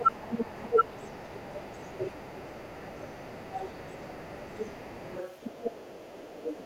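A speech recording in which the whole clip carries a doubled audio track: a second full-band copy trails by roughly 0.7 s at about the same level, with no decay or room colour, unlike a reverberant echo, most likely from a second, slower capture path. From 0.04 s to the end, the other side's voice leaks through faintly, roughly 25 dB below the talker, as a distinct second voice rather than a delayed copy of the main one, likely residual loudspeaker echo the canceller missed. The talker's speech is also suppressed in double talk at 0.0 to 0.11 s, dipping about 25 dB, and at 0.69 to 0.83 s, dipping about 20 dB. These are brief ducks, not a steady level loss, likely the echo canceller turning both voices down while they overlapped.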